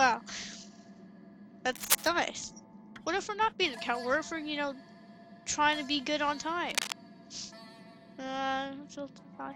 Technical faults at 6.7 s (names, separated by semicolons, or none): cable scratch noise